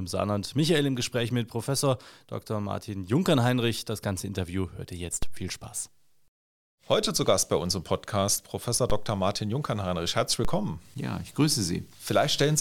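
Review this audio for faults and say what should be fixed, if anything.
A DC step occurs three times in this speech, at 5.23, 8.90 and 10.45 s. At each one the waveform's zero line suddenly shifts by about -18 dBFS. A 2 Hz high-pass then bleeds the offset away, so each step is heard as a brief low thump. Unlike a dropout or a mouth click, the speech runs on unbroken and nothing is lost. The disturbance is a low-frequency jump and settling, heard as a thump or click rather than a break in the speech. To prevent it, stabilise or AC-couple the input so the converter's offset cannot change mid-recording, and keep a DC-blocking high-pass in the chain.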